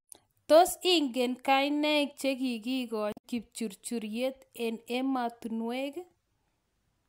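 Damaged data in the compressed stream hits the speech from 3.10 to 3.24 s, just before "kipchurchuryet eng". For about 140 ms the encoded data is corrupt, so the decoder cannot read those frames properly. It loses its place in the bitstream and has to scan forward for the next valid frame header before normal decoding resumes. What comes out in that gap is a brief, garbled break in the speech.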